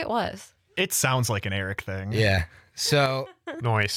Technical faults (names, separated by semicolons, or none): one channel drops out